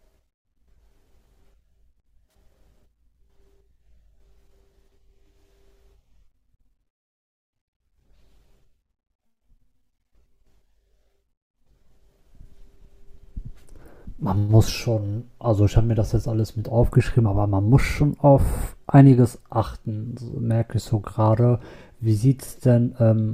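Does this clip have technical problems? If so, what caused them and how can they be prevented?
Yes. At 16.61 s in this speech there is a brief, quiet glitch, peaking at around -35 dBFS. This is a corrupt frame decoded: flipped bits in a couple of compressed frames gave the decoder wrong gains and codes, putting energy at the wrong frequencies. Checksums that detect damaged frames and conceal them would prevent it.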